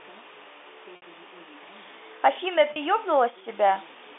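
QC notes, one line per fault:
0.96–1.02 s and 2.73–2.76 s, packet loss with pitch repetition: the sound briefly holds on a buzzy, frozen tone, 60 ms then 30 ms, where lost packets (about two, then one) were bridged by repeating the last pitch period over the narrow telephone band.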